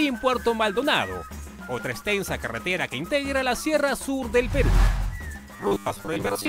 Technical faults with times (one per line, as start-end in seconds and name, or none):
5.56-6.48 robotic sound from repeated short buffers